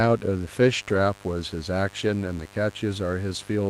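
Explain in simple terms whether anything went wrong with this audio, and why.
A couple of things went wrong. First, there's a mains buzz running under the whole recording, a steady, raspy hum tied to the 50 Hz electricity supply. It usually gets in through something like a light dimmer, a power adapter or a poorly shielded cable, which injects sharp little spikes twice per mains cycle. Those spikes spread into a whole stack of overtones, so it's a gritty buzz rather than a soft low hum.

Second, around 0.89 to 0.95 s there's a lost packet rebuilt from error correction. A bit of the audio went missing in transit, most likely two packets' worth, but the packets that followed each carried a rough backup copy. The decoder played those backups, so there's no gap or dropout. Instead, that short stretch, about 40 ms, sounds a little grainier and noisier than the rest, and it can lose some of its crispness at the top end.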